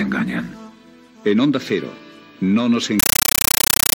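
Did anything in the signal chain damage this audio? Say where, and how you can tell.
Yes. At the playback stage, from 3.00 s to the end at 3.95 s, the sound is replaced by a compressed stream played as audio. An AC-3 bitstream on the digital output was treated as ordinary PCM samples instead of being decoded. Each frame arrives as a 9.33 ms burst of noise followed by zero padding, repeating at 31.25 Hz. This produces very loud, chattering static. The burst density fits a 448 kbps stream.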